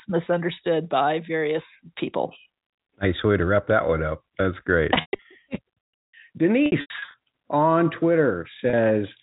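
Brief held, buzzy stretches break the speech at 5.01 to 5.25 s, 6.66 to 7.14 s and 8.70 to 8.73 s. The first two have gaps scattered over 240 ms and 480 ms and runs up to 120 ms long enough to fade toward silence before the speech cross-fades back. This is packet loss with pitch repetition: the receiver bridged each missing stretch by looping the last pitch period, over a G.711 telephone-band signal capped at 4 kHz.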